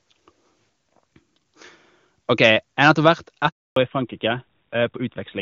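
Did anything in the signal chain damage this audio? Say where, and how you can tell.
Yes. Between 2.83 and 3.08 s the loudest peaks are flattened, with a harsh crackle riding on them, about 4 dB past the converter's limit on a small fraction of samples. This is likely microphone overload at the converter stage: the input volume was set too high and the tops of the waveform were sheared off. Unlike codec roughness, the distortion tracks only the loudest moments and vanishes as soon as the level falls.

At 3.06 s, right at the end of that distorted stretch, the whole signal, voice and background together, drops by about 3 dB in a single step and stays there. This is a microphone volume step-down in call processing, likely the software reacting to the clipping by lowering the device's input gain. A fade or a quieter talker would change the voice gradually and leave the background untouched. 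Here both fall at once, immediately after the overload.

From 3.48 to 3.76 s the sound dies away quickly and there are 280 ms of dead silence before it resumes. That is a handover gap on the network side: while the call moved to another link, no speech frames arrived, so that stretch is simply lost. It differs from a driver or buffer dropout because it is not a short repeating click or glitch. It is one clean hole with a rapid decay into it.

From 3.76 s to the end, everything above 4 kHz is gone and the voice sounds duller and rougher. This is fallback to narrowband at the codec stage, which points to the call switching from AMR-WB at 23.85 kbit/s to AMR-NB at 12.2 kbit/s as the new link came up. Before the handover the HD Voice path is clean, with at most faint codec damage. A playback low-pass filter would not coincide so exactly with the gap.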